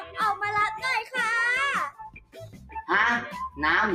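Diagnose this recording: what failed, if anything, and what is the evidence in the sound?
Call processing stage: a speech noise suppressor has been left on this non-speech audio, so sustained content swings in level by roughly 10 dB throughout.

Sound cut by the noise suppressor between 1.9 and 2.81 s, sinking by up to about 20 dB as the suppressor mistakes it for noise.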